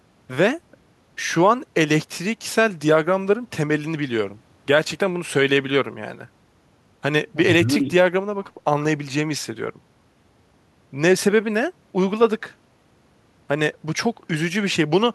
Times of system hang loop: none

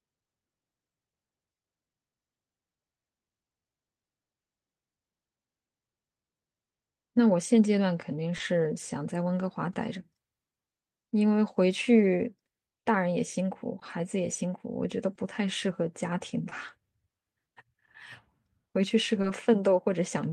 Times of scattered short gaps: 0.25-19.25

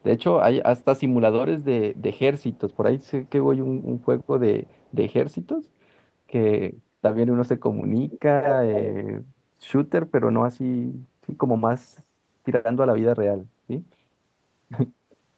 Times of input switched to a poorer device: none

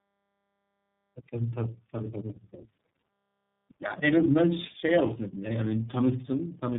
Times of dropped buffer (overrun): none

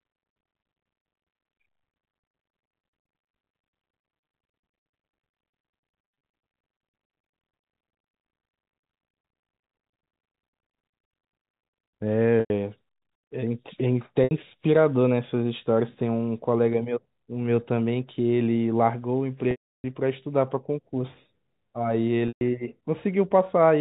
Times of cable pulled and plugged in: none

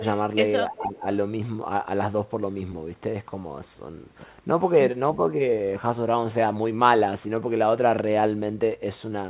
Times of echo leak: 0.77-0.84

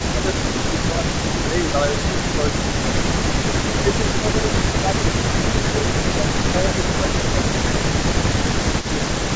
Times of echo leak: 2.48-2.80, 5.91-6.45, 6.89-7.60, 7.93-9.36

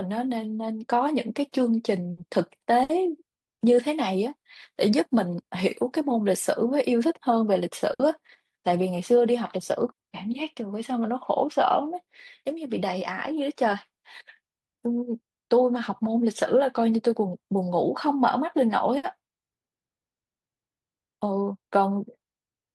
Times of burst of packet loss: 2.11-2.20, 2.83-2.92, 7.93-8.02, 9.91-10.00, 18.97-19.06

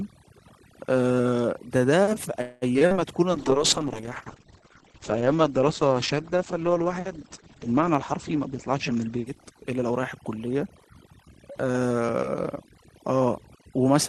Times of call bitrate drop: 3.33-11.49

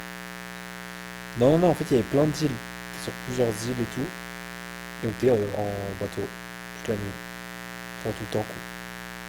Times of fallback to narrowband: none

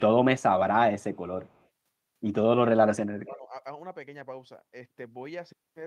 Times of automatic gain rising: none

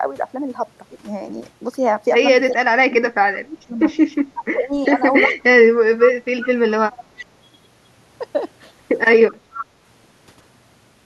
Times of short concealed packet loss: none

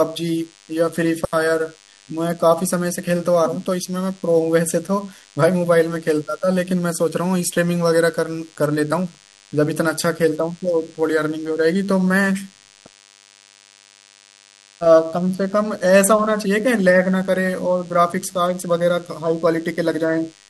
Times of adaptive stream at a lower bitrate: none

